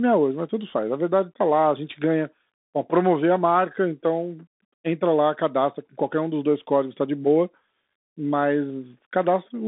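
Throughout the whole clip the speech has passed through a Bluetooth CVSD headset codec, which fits a 64 kbps CVSD link. The codec encodes each sample as a single up-or-down step whose size adapts, so fast, loud high-frequency movement outruns it. The band runs from about 200 Hz to 3.7 kHz, with nothing above 3.8 kHz, giving a thin, boxy sound. The coding damage is plainly audible: s sounds turn scratchy, loud bright moments distort, and a granular hiss sits under the speech.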